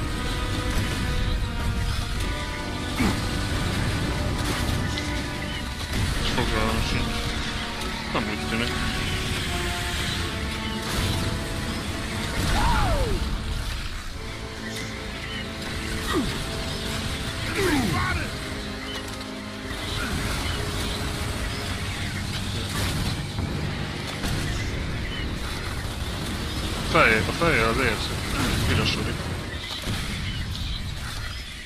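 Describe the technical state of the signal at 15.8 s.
At 15.8 s the signal is intact, with no dropout, clipping, glitch or other audible fault at that point.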